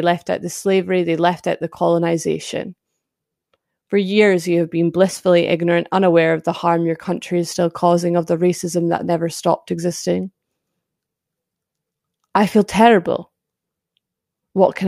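Speech recording with nothing technically wrong with it.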